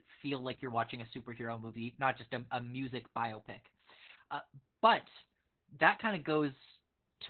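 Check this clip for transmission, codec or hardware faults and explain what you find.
The clip has one codec fault, present throughout.

Opus voice compression affects the whole speech clip. The SILK coder has cut the band to narrowband and coded the excitation coarsely, which fits a rate of about 8 kbps. Speech sounds muffled, hoarse and slightly robotic. On a spectrogram, everything above 4 kHz is empty.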